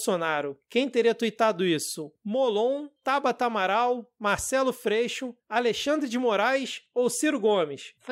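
No technical faults can be heard anywhere in the recording; the speech signal stays continuous and stable throughout.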